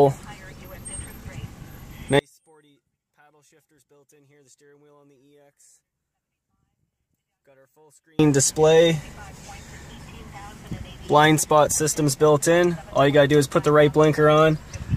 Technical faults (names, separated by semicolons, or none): one channel inverted